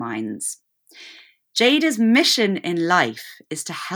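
Nothing stood out on listening to this speech recording.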